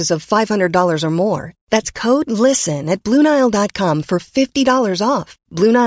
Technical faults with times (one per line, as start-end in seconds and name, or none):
none